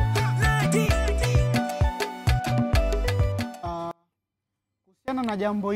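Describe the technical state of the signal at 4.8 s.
At 4.8 s the signal path is in the middle of an audio dropout to a faint residue, running from 3.91 s to 5.08 s, about 1.17 s in all. The wanted signal has most likely been lost upstream while the chain after the break stayed live. The sound therefore cuts off abruptly rather than fading, and the gap holds only a faint sound, roughly 35 dB below the signal's normal level, until it snaps back at 5.08 s.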